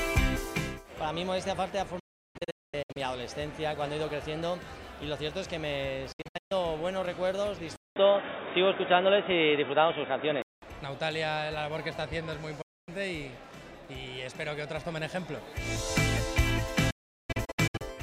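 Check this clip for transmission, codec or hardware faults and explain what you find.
Two kinds of fault are present: repeated digital broadcast dropouts and one stretch where the input appears to switch to a poorer device.

Digital broadcast dropout, at 1.99–2.97 s, 6.12–6.52 s, 12.62–12.89 s and 16.90–17.82 s. The receiver stops getting valid frames and mutes until good ones return, with a fade of about 8 ms into each gap. The first and last events break into several holes (736 ms lost across 960 ms, and 608 ms across 896 ms, with longest runs of 352 and 384 ms). The second loses 288 ms across 384 ms. The third is a single 256 ms gap. The audio in those holes is gone, not delayed.

Input switched to a poorer device, from 7.76 to 10.62 s. The sound cuts out for about 200 ms. It then returns dull and boxy, with nothing above 3.8 kHz, a level shift of about 5 dB and a new background noise floor about 45 dB below the signal. 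This is most likely a change to a different microphone or a headset's call profile, with its own band limit, tone and noise. The fuller sound comes back after 10.62 s.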